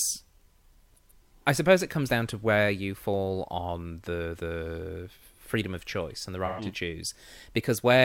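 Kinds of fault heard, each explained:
AAC frame loss with concealment: about 128 ms of coded frames (consistent with three AAC frames) never reached the decoder, which filled the gap from the last good spectrum. Right after "of choice and the", the speech briefly turns smeared and noisy.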